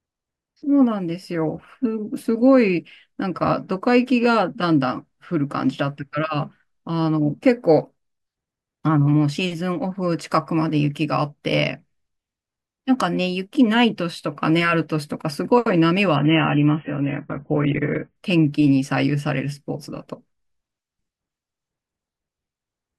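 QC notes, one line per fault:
16.16–18.16 s, adaptive stream at a lower bitrate: the speech abruptly loses its top end, with nothing audible above about 3.8 kHz, and takes on a dull, smeared, swirly texture before snapping back to full bandwidth at 18.16 s with no gap at either edge. This is the player switching from a 96 kbit/s AAC-LC rendition down to a 16 kbit/s one for two seconds; at that rate the encoder band-limits hard and quantises coarsely, producing the muffled, artefact-laden stretch.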